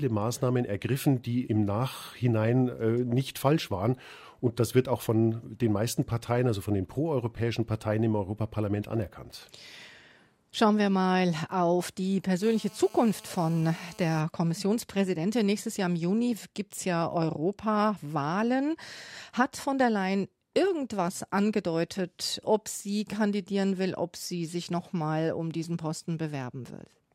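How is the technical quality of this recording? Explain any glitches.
One glitch stands out. From 12.43 to 14.21 s there is GSM phone buzz. A nearby 2G phone in a call was transmitting radio bursts 216.7 times a second. The audio circuit rectified those pulses. The result is a steady, hard, raspy buzz with many harmonics, about 24 dB below the speech and unrelated to it.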